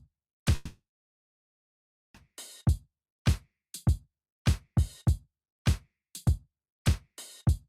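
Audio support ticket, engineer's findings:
Sound stalls 0.55–2.16 s, brief fading buzz then about 1.3 s silence, resumes intact. Call audio freeze, likely jitter buffer underrun from delayed packets; 1.6 s delay added.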